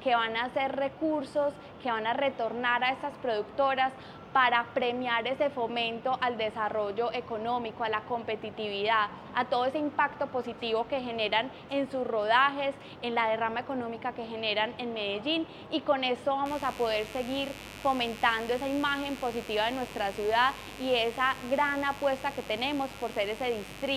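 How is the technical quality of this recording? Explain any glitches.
The recording has one fault, mains buzz, from 16.46 s to the end. Switching spikes from a dimmer, rectifier or unshielded lead get into the signal path twice per 50 Hz cycle, adding harmonics up into the kilohertz range. This produces a steady, raspy buzz roughly 15 dB below the sound.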